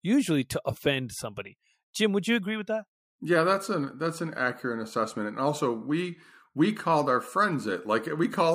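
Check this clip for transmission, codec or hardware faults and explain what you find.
Crude rate conversion begins at 3.89 s and continues to the end of the clip at 8.55 s. From that point the speech has been resampled by a small ratio without a proper anti-aliasing filter, and the error pattern fits linear interpolation from 44.1 kHz to 48 kHz. Because the ratio between the two rates is not a whole number, the interpolation error repeats in a cycle that creates inharmonic tones. It sounds like a faint gritty fizz riding on louder and brighter syllables, roughly 40 dB below the speech.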